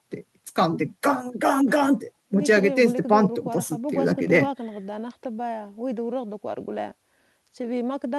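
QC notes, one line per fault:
No technical faults are audible anywhere in the speech signal.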